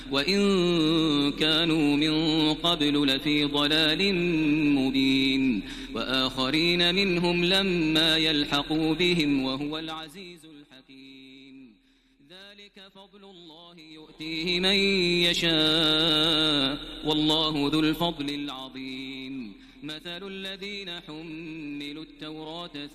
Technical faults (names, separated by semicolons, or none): zipper noise